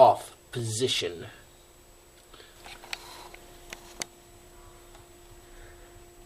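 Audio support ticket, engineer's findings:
Regular clicks, about seven, every 0.97 s from 0.59 to 5.43 s. Likely clock drift buffer slips: two independent device clocks about 700 ppm apart, so the buffer drops or repeats a few dozen samples at each click.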